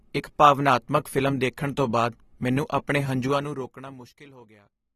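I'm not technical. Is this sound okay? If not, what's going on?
No. All the way through, the speech sounds plainly processed, dull and smeared, with nothing above about 13.9 kHz. That is likely AAC compression (AAC-LC): to save space, the encoder discarded the highest sounds and approximated fine detail it judged less noticeable.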